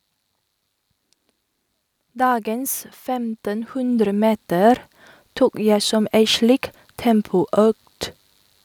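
A speech recording in which, from 2.13 s to 4.88 s, the voice and the background noise swell together by about 11 dB. This is automatic gain rising: the gain control judged the input too quiet and gradually raised its level.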